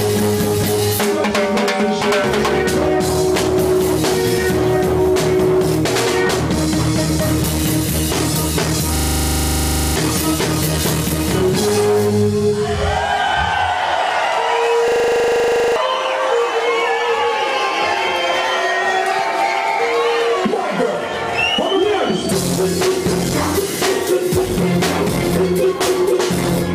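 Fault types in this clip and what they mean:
System hang loop: The playback side froze while the sound hardware kept replaying the same small stretch of its buffer. Here a 40 ms slice repeats exactly, 25 times a second, giving a hard, rattling buzz rather than a smooth tone. It happens twice, from 8.96 to 9.96 s and from 14.88 to 15.76 s. Each time, roughly a second of the real audio never plays.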